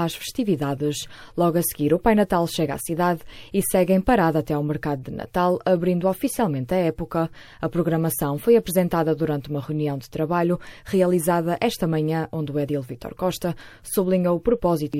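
No technical faults can be heard anywhere in this clip. There is nothing to place on the timeline.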